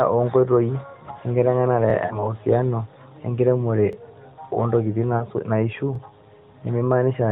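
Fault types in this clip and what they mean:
Overlapping chunks: at 1.90–1.93, 3.93–3.95 and 5.95–5.98 s, a stutter recurs every 2 s. Each new 2 s chunk begins about 25 ms before the previous one ended, so that sliver of speech plays twice at every join.
Lost AMR speech frames: at 2.06–2.33 and 5.17–5.24 s, the narrowband mobile decoder lost about 40 ms of speech, fitting two 20 ms frames. It bridged the gap by reusing the last good pitch and vocal-tract settings at falling gain, which sounds like a brief smeared dip before the voice recovers.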